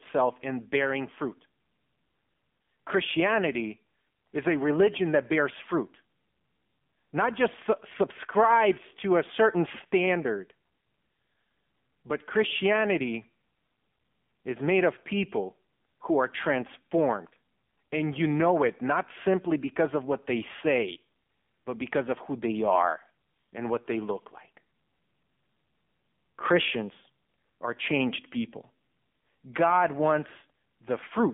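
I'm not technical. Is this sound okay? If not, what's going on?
No. From start to finish the speech has been through an AMR narrowband mobile codec, the compression used on older mobile calls. Everything above about 3.6 kHz is gone, and the voice sounds buzzy and synthetic, which a merely muffled, band-limited line wouldn't do.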